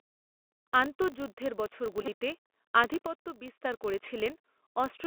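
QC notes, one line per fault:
Throughout, Bluetooth CVSD headset codec: the audio has the narrowband headset sound, with the line band running roughly 200 Hz to 3.4 kHz and nothing up top. CVSD sends a single up-or-down bit per sample at 64 kbps, and its step size can't keep up with fast loud movement, so the damage is plainly audible: s sounds come out scratchy, louder bright bits smear and distort, and a grainy hiss sits under the speech the whole way.
Throughout, filter restarted on every block: there's a steady 50 Hz buzz riding along with the speech, rising and falling with its level. That's a filter dropping its memory at each block boundary and starting cold, so every block opens with a little transient. Those transients land 50 times a second, which points to blocks of about 20 ms, and together they fuse into a low buzz.
2.02–2.08 s and 4.06 s, Bluetooth headset packet repeated: in the first stretch about 30 ms of audio is lost in bits and pieces over roughly 52 ms, with the longest run around 10 ms. 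Each gap is filled by decoding the previous packet's bits again at the 3.75 ms packet rhythm, so it comes across as brief rough patches of buzz near 267 Hz. The one at 4.06 s is shorter, about 7.5 ms, which fits a couple of packets, so it's just a small gritty tick.
3.07–3.65 s, sudden gain jump: the level drops by about 6 dB in one step, speech and background noise together, and comes back up at 3.65 s. There's no fade on either edge, just a hard switch in loudness. The likely cause is a digital gain setting or bit shift applied with no ramp, so the change happens between one sample and the next.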